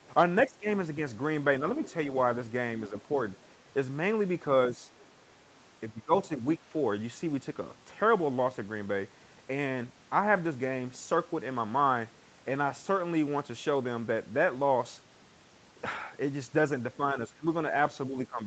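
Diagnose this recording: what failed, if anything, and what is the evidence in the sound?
Call processing: speech suppressed in double talk. The speech dips about 15 dB at 0.02–0.66, 5.91–6.65 and 17.14–18.46 s. This is likely the echo canceller ducking overlapping talk.

Call processing: the other side's voice is leaking through. A faint second voice, about 25 dB down, runs from 0.67 to 1.93 s. It is likely uncancelled loudspeaker echo.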